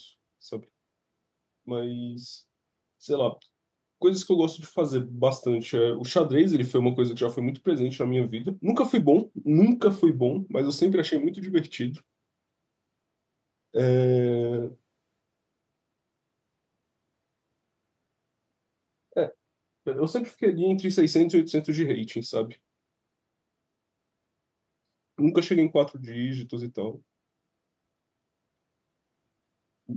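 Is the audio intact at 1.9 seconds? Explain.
Yes, at 1.9 seconds the speech is intact, with no fault at that moment.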